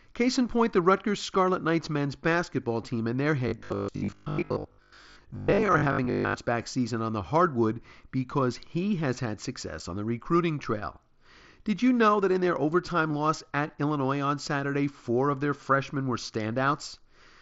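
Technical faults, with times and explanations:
3.48–6.34 s, robotic sound from repeated short buffers: after "basketball team and their" the speech turns into a rigid metallic buzz at 50 Hz until "back season on the". The likely cause is audio arriving too seldom, so a 20 ms stretch is replayed over and over, replacing most of the real speech.
3.72 s, 9.79 s and 13.68 s, concealed Bluetooth headset packet loss: these are brief hiccups, the first two nearly hidden, one inside the robotic stretch, one between "because he has had" and "on the recruiting trail", and one after "in their overtime loss". Missing headset audio of 7.5 ms, or 15 ms at the last point, was filled with a continuation of the preceding waveform.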